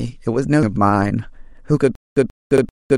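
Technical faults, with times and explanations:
0.63 s and 2.58 s, damaged data in a compressed stream: a quick blip each time, where the decoder hit corrupt frames, lost sync and searched for the next frame.
1.95 s to the end, stutter with silent gaps: a 135 ms burst repeats five times, each followed by about 211 ms of dead silence, likely a stalled player replaying its last fragment.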